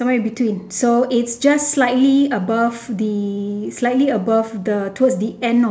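Speech recording with no audible technical faults.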